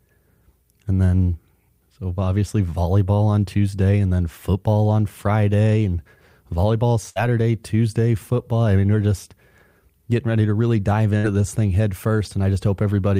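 At 7.09 s, just after "and volleyball", a burst of packet loss cuts in until 7.19 s. Packets arrived too late or never came. The receiver stretched the last sound for about 60 ms, fading it. About 60 ms of speech is skipped. At 11.18 s, after "ready to really dive", it happens again until 11.26 s. The fill fades out, and speech resumes with "this thing head".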